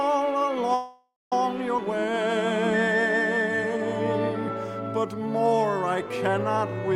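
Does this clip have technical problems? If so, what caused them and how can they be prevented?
Yes. From 0.74 to 1.33 s there is a call audio freeze. Packets were likely held up in the network long enough for the jitter buffer to run dry, so the receiver carried the last sound forward as a fading buzz that ends in about 230 ms of silence. When the packets arrived, playback resumed exactly where it stopped. The 572 ms gap was inserted without losing anything, but delay jumped by that same amount. Steadier network paths and a larger buffer margin would prevent this.

At 1.77 to 1.79 s there is a skip ahead. With later audio already waiting in the buffer, a stretch was dropped, on the way or by the receiver, cutting the built-up delay by roughly a tenth of a second. About 150 ms of sound is gone, and the two sides are joined by only a 10 ms bridge, so playback lurches forward abruptly. Shrinking excess delay gradually through time-compression rather than dropping whole chunks would avoid this.

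From 1.85 to 3.79 s there is a jitter buffer slow-down. The buffer was running low or had just raised its target delay, so the receiver rebuilt its reserve by repeating single pitch periods and slivers of pauses over and over. That adds 118 ms and slows playback to 94% speed at unchanged pitch, giving drawn-out sounds. A more stable buffer target, with fewer abrupt swings in delay, would keep this stretching from being needed.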